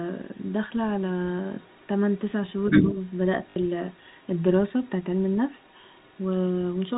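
Faint traces of the other side's voice leaking through appear at 0.1 to 0.52 s, 0.89 to 1.01 s and 1.44 to 2.19 s. They sit far below the talker, likely loudspeaker echo the canceller missed. From 2.51 to 4.42 s the leak is much stronger, roughly as loud as the speech. From 2.81 to 2.96 s the talker dips by around 5 dB. This is speech suppressed in double talk, likely the canceller turning both voices down. At 3.5 to 3.56 s, 60 ms of audio is lost. This is packet loss with the last packet repeated, which fits three 20 ms packets. It gives a brief robotic stutter with a 50 Hz buzz. Weak leakage returns at 4.82 to 6.28 s and 6.69 to 6.89 s. The 4 kHz telephone band of G.711 coding is heard throughout.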